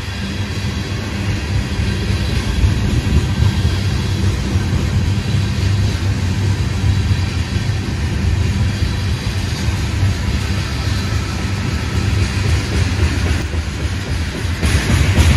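A sudden gain jump runs from 13.42 to 14.63 s: the level drops by about 5 dB in a single step, and the background noise falls with the sound before both step back up. This is likely a digital gain change applied without any ramp.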